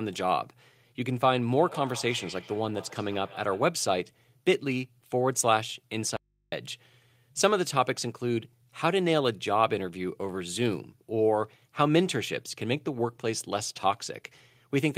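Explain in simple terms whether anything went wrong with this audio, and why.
Two faults can be heard in this speech clip.

From 1.57 to 3.79 s there is a feedback echo between two devices. Two devices in the same room seem to be on one call, so one device's loudspeaker plays sound that the other device's microphone picks up again. Each echo canceller only removes what its own device plays, so this sound gets through. The speech comes back roughly every 150 ms as a thin, ringing repeat, well below the main speech.

At 6.17 s there is an audio dropout to a faint residue. The speech vanishes abruptly for about 0.36 s, until 6.52 s, and only a low mains hum remains in the gap. It does not sound like a natural pause or a fade. The likely cause is that the speech signal was lost upstream while the rest of the path stayed switched on, so the open input's hum carried through at a much lower level than the speech.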